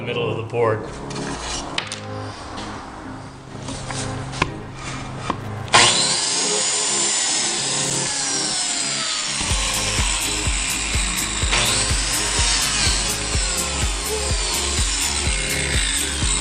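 Irregular bursts of scratchy crackle chop the sound from 5.41 to 5.66 s and again from 7.84 to 7.96 s: loose connector crackle, a worn contact rapidly making and breaking.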